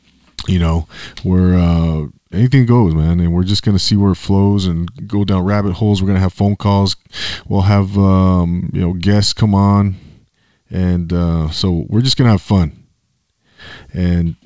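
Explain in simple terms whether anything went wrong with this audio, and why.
Nothing went wrong with this speech recording. It was carried over a normal internet call link using the G.722 call codec, which leaves out everything above 8 kHz, so the very highest, airiest part of the sound is missing, as expected for this kind of call.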